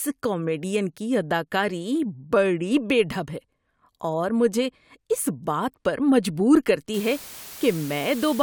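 At 6.94 s, just after "اس بات پر مجبور", the speech drops to low bit depth with dither. This lasts until the clip ends at about 8.4 s. The audio is resolved with only 6 bits. Random dither is added before each sample is rounded. The rounding error then spreads out as steady white noise rather than distortion. It sits roughly 15 dB below the speech. The result is a constant, even hiss under the voice, with no grit or crackle.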